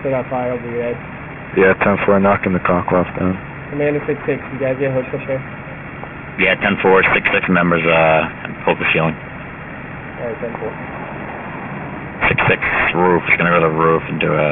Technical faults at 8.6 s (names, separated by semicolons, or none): aliasing